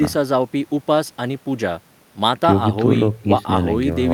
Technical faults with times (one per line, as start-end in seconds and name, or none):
none